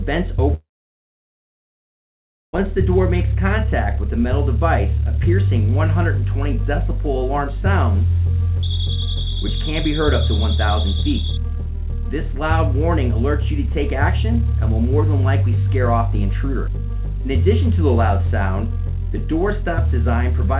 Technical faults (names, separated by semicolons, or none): long network dropout